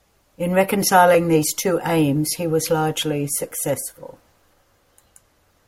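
From 1.15 s to 5.65 s, a regular click recurs every 1.13 s, about five in all. These are clock drift buffer slips, likely from two clocks differing by several hundred ppm, so roughly 30 samples are dropped or repeated each time.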